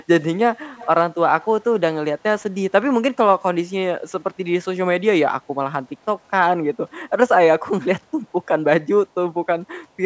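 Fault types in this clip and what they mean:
Echo leak: at 0.75–0.88 s and 6.2–6.25 s, a faint copy of the speech trails the original by about 0.3 s. It is roughly 20 dB down the first time and about 40 dB down the second. It likely comes from loudspeaker sound that slipped past the far end's echo canceller.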